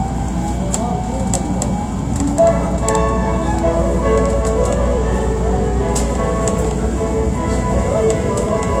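A short glitch breaks through the sound from 4.93 to 4.96 s. It is damaged data in a compressed stream: bytes in that stretch were corrupted, so the decoder misread the frames, lost sync and had to find the next valid frame header.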